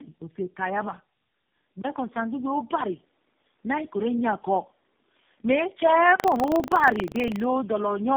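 From start to finish the speech sounds rough, muffled and warbly, with nothing above 3.4 kHz. This is tandem speech coding: the call passed through GSM full rate, G.729A and finally AMR-NB at 7.95 kbit/s, with G.711 links between them. Each of the three speech coders re-encoded the previous one's already damaged output.

At 1.82 s a gap of about 20 ms is followed by a change in tone. The level shifts by about 5 dB and a new noise floor appears, roughly 45 dB below the speech. This is most likely the input switching to a poorer device with its own coloration and a narrower band.

From 6.16 s to 7.48 s a robotic 25 Hz buzz rides on the speech. This is buffer tearing. The writer and reader of the audio buffer fell out of step, so a small slice of each period, a few percent, repeats audio from about 100 ms earlier. The hard joins recur at a rate that fits a period of about 40 ms.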